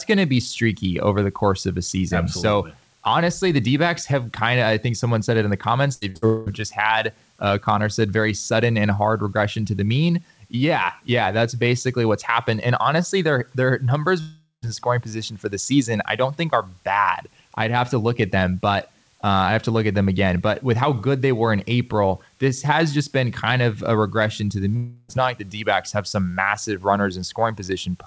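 A speech recording that comes through a G.722-style call path, with nothing above 8 kHz. Around 6 s the sound stutters: three short held buzzes or fading hisses at 5.94–6.03 s, 6.09–6.17 s and 6.17–6.24 s, each followed by a jump forward of about 60 to 80 ms. These come from bursts of packet loss, where the receiver stretched the last sound to cover packets that never arrived. Three longer gaps follow, at 6.26–6.48 s, 14.20–14.64 s and 24.76–25.10 s. In each, the sound smears into a fading buzz or hiss lasting about 0.2, 0.42 and 0.32 s. At 14.2 s it decays to silence for about 130 ms before the sound resumes further on. These point to a likely long network dropout, where the missing stretch was never played.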